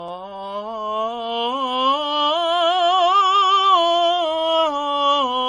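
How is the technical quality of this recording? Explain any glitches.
The technical quality is poor: the music carries layered compression damage from start to finish.

Throughout the clip, the sound shows what is likely transcoding between lossy codecs, with an MP3-style encode followed by a Vorbis one. Nothing survives above about 11.1 kHz, so the top end is dull. The artefacts of both codecs are heard together, because the second encoder spent its small bit budget re-coding the first encoder's errors. The character fits low bitrates of roughly 45 and 44 kbit/s. A spectrogram would show a hard horizontal ceiling at 11.1 kHz and blotchy, holed texture below it.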